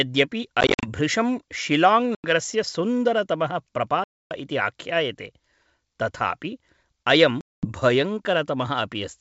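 Speech over a G.722 wideband call, clear to about 7 kHz, is broken by packet loss on an ADPCM call at 0.61–0.87 s (scattered short gaps), 2.15–2.27 s, 4.04–4.32 s and 7.41–7.67 s. The waveform shows hard-edged flat silences and the spectrogram shows blank vertical columns. Each gap ends in slightly distorted speech while the decoder's predictor re-syncs.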